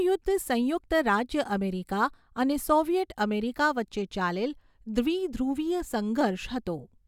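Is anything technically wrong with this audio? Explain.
No, nothing technically wrong can be heard in this speech recording, and the signal holds steady and intact all the way through.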